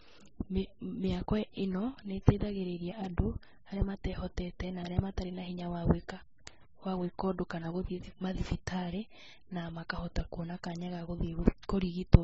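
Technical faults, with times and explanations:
Throughout, transcoding between lossy codecs: the speech has nothing above 7.9 kHz, and two distinct kinds of coding damage sit on top of each other, with artefacts from a first encoder overlaid by a second layer of MP3 artefacts. This likely comes from an AAC-LC encode at around 24 kbit/s followed by a re-encode to MP3 at around 32 kbit/s. The second encoder wastes its scarce bits reproducing the first one's errors and adds its own.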